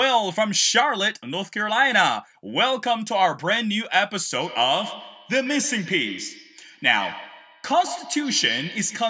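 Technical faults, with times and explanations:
4.4 s to 9.09 s, feedback echo between two devices: from 4.4 s to the end, each syllable is followed by a thinner, ringing copy roughly 150 ms later, peaking about 14 dB below the speech. Two devices in the same room were on the call. One played back what the other's microphone sent, and that microphone picked it up again. Each echo canceller removes only its own device's playback, so the sound keeps circling at that fixed delay.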